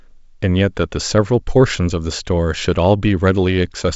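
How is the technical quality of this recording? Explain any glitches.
No glitches or faults can be heard in this recording. The speech has passed through G.722 wideband telephone coding at 64 kbit/s, so nothing reaches above 7.7 kHz, and the coding leaves at most a faint trace.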